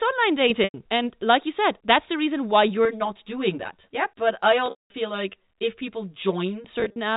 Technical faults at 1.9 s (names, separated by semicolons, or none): none